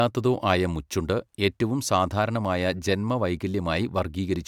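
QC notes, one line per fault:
No faults heard anywhere in the speech.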